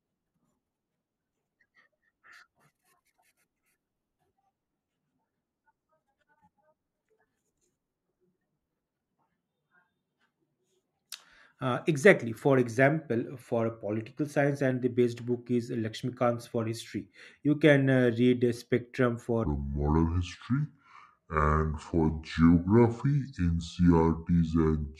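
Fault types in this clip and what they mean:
Section at the wrong speed: from 19.45 s to the end at 24.99 s, the speech plays at 0.662 times its recorded rate, so it runs slower and drops about seven semitones in pitch at the same moment, turning deep and drawn out. Because speed and pitch shift together and change abruptly, the likely cause is that this final stretch was played back or edited against the wrong clock rate, rather than being processed by a pitch or time-stretch tool.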